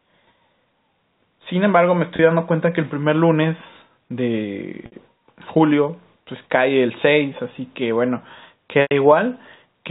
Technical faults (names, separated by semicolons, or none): packet loss with pitch repetition